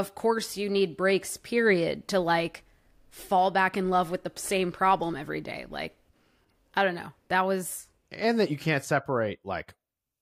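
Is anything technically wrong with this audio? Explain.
No, nothing technically wrong can be heard in this speech recording. There are no audible faults anywhere in the clip.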